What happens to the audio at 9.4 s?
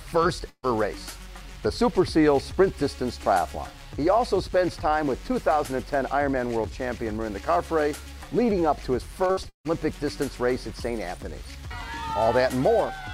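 From 9.27 to 9.67 s there is repeated packet loss: four gaps, the longest 158 ms, are patched by stretching the preceding sound. Unlike a single dropout, the holes recur, giving choppy, robotic audio.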